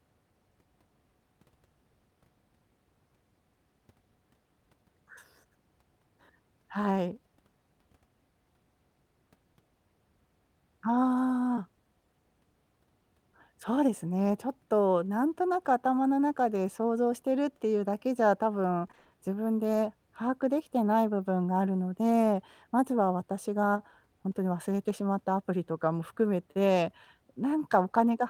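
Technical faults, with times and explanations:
18.87 to 19.07 s, repeated packet loss (robotic sound): across this fifth of a second the stream drops out again and again. Roughly five brief holes, none longer than about 20 ms, are each patched by stretching the sound that came just before, so about half of the span, some 100 ms, is filled-in material rather than real audio. The rapid alternation of genuine and repeated fragments makes the speech choppy and machine-like.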